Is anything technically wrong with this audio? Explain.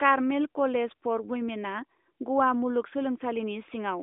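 No, nothing here is technically wrong: the speech comes through an AMR narrowband mobile codec path that behaves as such a line should, with the band running from about 250 Hz to 3.6 kHz, nothing above 3.7 kHz, and only light coding texture, which fits the codec's 12.2 kbps mode.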